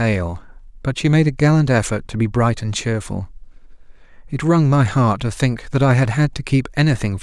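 No technical faults are audible.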